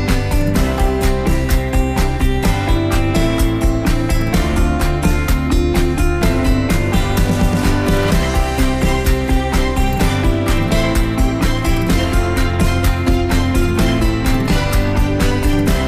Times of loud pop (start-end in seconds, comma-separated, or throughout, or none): none